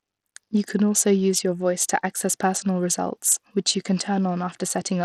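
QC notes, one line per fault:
Throughout, Bluetooth SBC compression: the speech carries a gritty, grainy edge, and the treble flickers in and out instead of holding steady. The damage is plainly audible. The likely cause is an SBC link with a small bit pool, which fits a bitrate around 80 kbps. The upper sub-bands get few or no bits, and the rest are coarsely quantised, adding noise and aliasing. A spectrogram shows patchy, blocky gaps and smeared energy in the top band.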